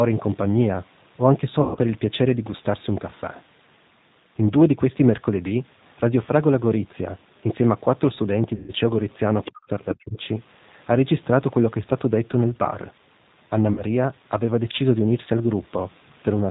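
The whole clip carries the sound of the G.729 codec, at 8 kbit/s, with plainly audible damage. The codec rebuilds each 10 ms frame from a vocal tract filter, a pitch predictor and a few pulses. That model leaves the speech rough and slightly synthetic. Nothing above 4 kHz gets through, so sibilants are dull and the top end sounds boxed in.

At 1.61 to 1.79 s, VoIP packet loss is concealed by the speech codec. About 140 ms of audio went missing. The decoder stretched its last pitch and filter state to fill the gap, at a falling gain. The result is a stretched sound that fades. Because each frame builds on the one before, the speech stays weak briefly after the gap. The same happens at 8.56 to 8.72 s, covering 120 ms.

From 9.44 to 9.51 s, a second, fainter voice comes through, about 15 dB below the talker. This is likely the other side's voice leaking through. The far end was playing on a loudspeaker, and the echo canceller left part of it in the microphone signal.

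Right after, speech is suppressed in double talk, at 9.50 to 9.71 s and again at 9.94 to 10.18 s. The talker's level dips sharply, by around 40 dB at its deepest, and the voice nearly cuts out. Both sides were likely talking at once. The echo canceller could not tell the talker from the echo, so it turned everything down.

At 13.73 to 13.84 s, there is one more short packet-loss gap. It covers about 40 ms, which fits two lost 20 ms packets. The decoder again bridges the gap with a short extension of the previous sound. The level sags for a moment before the speech recovers.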